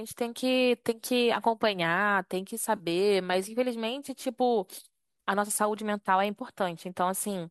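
At 2.76 s a brief smeared, noisy and phasey patch interrupts the speech, clearing by 2.83 s. This is AAC frame loss with concealment. Roughly 40 ms of coded audio went missing, which fits about four short low-delay frames, likely from AAC-ELD coding at around 64 kbps. The decoder covered the gap by reusing the last good spectrum with randomised phase, so the sound smears instead of dropping to silence.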